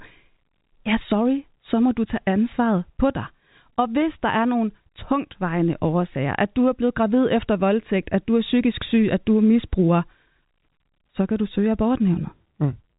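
A speech recording carried over G.711 A-law telephone coding, with nothing above 3.8 kHz as that format implies, and nothing technically wrong with it.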